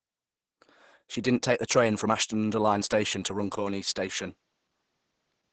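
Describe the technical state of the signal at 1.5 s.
At 1.5 s, as throughout the clip, Opus voice compression starved the SILK coder, consistent with about 10 kbps, leaving speech muffled, hoarse and faintly robotic, with nothing above 8.8 kHz.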